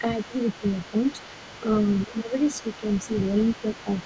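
A steady, raspy buzz runs under the speech for the whole clip, sitting about 40 dB below it. This is mains buzz: sharp switching spikes at twice the 50 Hz mains rate leak into the signal path, spreading harmonics up through the band, which stops near 8 kHz here.

From 0.19 s to the end, a second, quieter voice runs faintly behind the talker, about 20 dB down. This is the other side's voice leaking through, likely because the far end's loudspeaker output reached the microphone and the echo canceller left a residue.

The talker's voice briefly sinks by around 10 dB at 0.61 to 0.66 s, 0.91 to 0.95 s, 1.5 to 1.66 s, 2.08 to 2.33 s and 2.63 to 2.85 s. This is speech suppressed in double talk, likely the echo canceller ducking everything when both sides spoke together.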